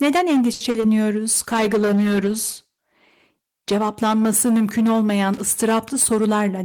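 A speech recording carries five distinct faults. From 0.53 to 0.62 s a short stall from a late packet holds one sound for 70 ms; nothing is lost, only delayed, unlike the loss that follows. At 0.70 to 0.76 s and 0.80 to 0.84 s, short concealed packet loss replaces 40 ms and then 20 ms with extrapolated sound, giving brief smears where real audio is actually gone. A call bitrate drop from 1.38 to 4.94 s takes the coding from 40 to 14 kbps, sitting at the lowest rate for 1.5 s. The speech turns rough and muffled throughout, rather than glitching in isolated moments. Between 5.34 and 5.41 s, loose connector crackle adds an irregular burst of crackle or scratching, which comes from the physical contact rather than from network timing. From 5.95 s to the end, a jitter buffer speed-up plays the audio at 108% speed at unchanged pitch, trimming about 70 ms of backlog, so the speech sounds hurried rather than higher-pitched.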